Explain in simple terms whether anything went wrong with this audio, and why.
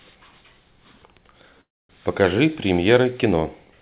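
Delayed packets likely caused a call audio freeze from 1.61 to 1.90 s. The speech drops to near-silence, then resumes exactly where it stopped, with nothing lost.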